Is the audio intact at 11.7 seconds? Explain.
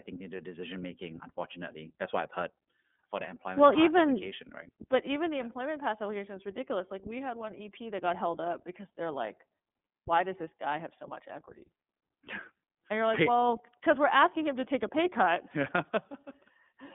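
No, not really. The whole clip, 11.7 s included, has gone through the iLBC codec. Each 30 ms frame is coded on its own, so the speech comes out a bit rough and synthetic. The band stops around 3.7 kHz, which fits iLBC's 13.33 kbps mode.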